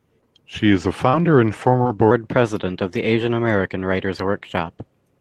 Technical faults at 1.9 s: short concealed packet loss

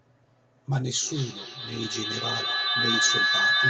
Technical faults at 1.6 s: feedback howl

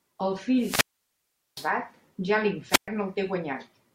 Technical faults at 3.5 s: none

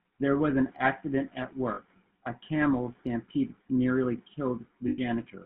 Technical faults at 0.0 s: GSM full-rate codec

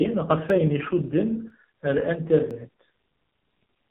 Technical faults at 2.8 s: AMR narrowband mobile codec; clock drift buffer slips

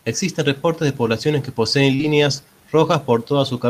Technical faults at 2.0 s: short concealed packet loss; lost packet rebuilt from error correction

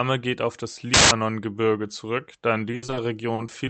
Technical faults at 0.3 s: none

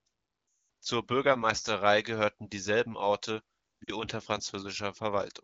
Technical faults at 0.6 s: lost AMR speech frames

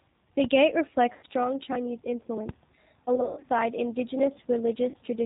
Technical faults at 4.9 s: G.729 codec; VoIP packet loss concealed by the speech codec

